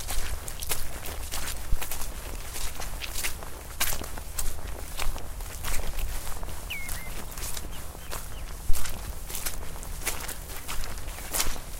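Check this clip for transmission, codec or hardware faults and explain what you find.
Two phantom power thumps are present. They occur at 1.73–1.89 s and 8.70–8.93 s. A supply switching on a live input sends a voltage step through the coupling capacitors. Each is a deep thump, peaking at about -11 dBFS and -7 dBFS, decaying over 36 ms and 52 ms.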